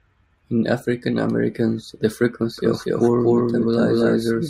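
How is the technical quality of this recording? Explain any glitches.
There's one real glitch. From about 2.58 s to the end, you get a doubled audio track: a second, full-band copy at roughly the same level trails the original by around a fifth of a second, likely from a slower capture path or an edit stacking two misaligned copies. It kicks in abruptly and adds no decay or room colour, so it sounds like a flat, slapback-style repeat.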